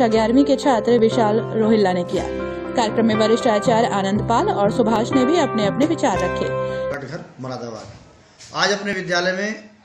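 Brief clicks or tiny skips land at 0.99, 2.97, 4.96, 6.94 and 8.93 s, every 2 s: overlap between stream segments, where overlapping timestamps trim real audio at each boundary.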